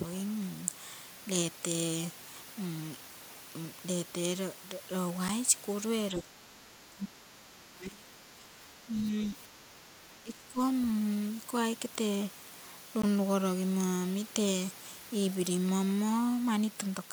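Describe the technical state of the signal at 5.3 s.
At 5.28 s the speech drops into a block of digital silence lasting about 8 ms. For that stretch the signal falls to silence, so the sound stops dead and restarts with no fade. The abrupt edges are heard as a single tick. On a waveform it appears as a flat, near-silent stretch, cutting the trace off sharply. On a spectrogram it shows as a thin vertical bar of empty black, with broadband click energy at its edges.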